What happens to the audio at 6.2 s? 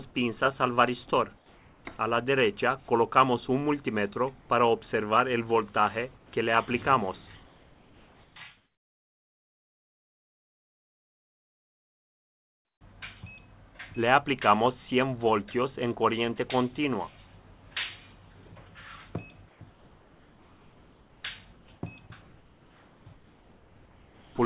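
Between 6.17 and 6.32 s the sound gives way to steady, featureless noise for 150 ms, about 80 ms of it swallowing real sound. This is most likely sound dropped by the voice detector: the sender judged the passage to be background and the receiver filled the gap with comfort noise. That flat hiss sets it apart from packet loss, which leaves repeated or smeared fragments.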